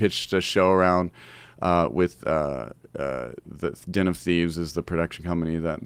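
Nothing in the recording stood out as a technical fault on listening.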